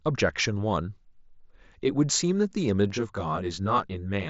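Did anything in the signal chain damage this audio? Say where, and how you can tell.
Yes. From 2.90 s to the end of the clip at about 4.3 s, the speech turns rough and slightly doubled. This is channel delay (comb filtering) at the driver or buffer stage. One channel arrives roughly 20 ms late, and when both are summed to mono, the shared content cancels at evenly spaced frequencies. The first notch sits around 30 Hz, and a fixed comb of dips repeats up the spectrum. The mSBC headset codec's roughly 7.7 kHz band limit is audible throughout, with light grain on loud sounds.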